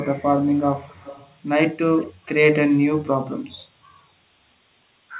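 Echo leak at 0.25–1.37 s and 1.99–2.09 s: speech returns 280 ms late, about 20–25 dB down, likely loudspeaker pickup the echo canceller missed.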